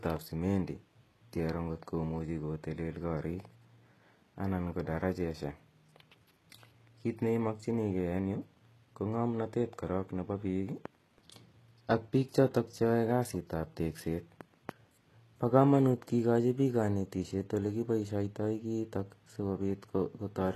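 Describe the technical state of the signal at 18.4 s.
At 18.4 s the speech shows the HE-AAC compression heard throughout. Sibilants sound gritty and metallic, with nothing above 12.3 kHz. The treble is likely rebuilt from copied lower bands, which fits a 16 kbps stream.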